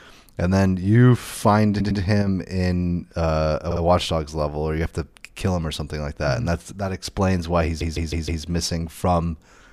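At 1.79 s a short run of compressed frames was delivered more than once, so the decoder replays the same 104.5 ms block two extra times. The speech stutters, and the clip stretches by 209 ms. This is a repeated-frames fault, and the block length fits about four frames.

At 2.22 s one stereo channel likely drops out for 50 ms. After the mono sum the shared sound falls abruptly by about 6 dB, then recovers.

At 3.70 s the repeated-frames fault returns with a shorter 52 ms block played two extra times, which adds 104.5 ms and gives a quick stutter.

From 6.79 to 7.05 s a channel likely drops out again. The level sags by about 6 dB for roughly a quarter of a second, leaving a brief dip.

At 7.80 s the longest repeat appears. A 157 ms block is played four extra times, adding 627 ms, and it is heard as a stutter lasting until 8.43 s.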